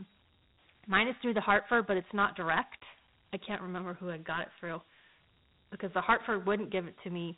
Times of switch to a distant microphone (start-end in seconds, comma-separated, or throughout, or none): none